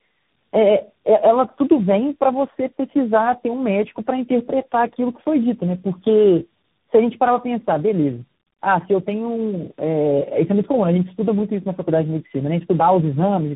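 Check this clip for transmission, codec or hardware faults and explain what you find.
One fault runs through the whole clip: tandem speech coding. From start to finish, the speech sounds like it passed through several speech codecs in a row, probably three. Each stage decoded and re-encoded the previous stage's damaged output, so the errors stacked. Nothing reaches above 3.8 kHz, so the speech is muffled and narrowband. The stacked coding adds roughness and a watery warble. That texture suggests AMR-style coders, with a final waveform coder like CVSD.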